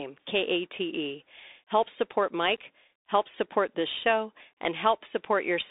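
From start to finish the speech runs through a Bluetooth CVSD headset codec, squeezed into roughly 300 Hz to 3.7 kHz. The one-bit delta coding, which fits a 64 kbit/s stream, can't keep up with loud bright sounds, so s sounds turn scratchy over a gritty, granular hiss.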